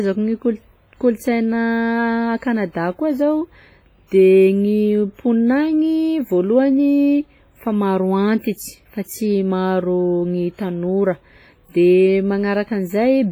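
Throughout, the speech rings and smears, its hiss breathing with each syllable rather than holding steady like background noise: likely heavy WMA compression, fitting roughly 24 kbps.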